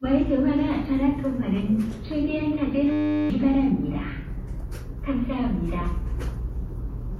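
From 2.92 to 3.3 s, a system hang loop replaces the sound with a steady 100 Hz buzz. A frozen computer or driver left the hardware replaying one 10 ms buffer 38 times, losing about 0.4 s of audio. The waveform shows identical repeating cycles, and the spectrogram shows evenly spaced harmonic lines at multiples of 100 Hz.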